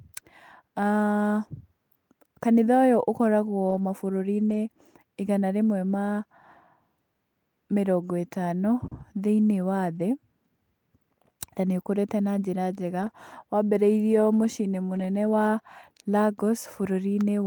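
Speech with two kinds of network damage. Lost packets rebuilt from error correction appear at 3.69, 4.49, 8.91, 9.95, 13.01 (just after "na njĩra njega") and 14.95 s: 40 to 60 ms stretches that turn rough and noisy without any gap, because a low-bitrate copy was decoded instead. Short concealed packet loss at 8.87 s is different: about 40 ms was extrapolated from the preceding sound, so it smears or wobbles rather than roughening.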